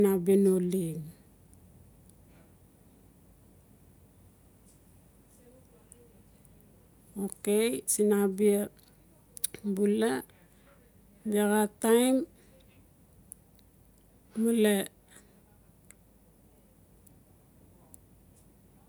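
No technical faults can be heard anywhere in the speech recording, which carries on without any audible defect at any point.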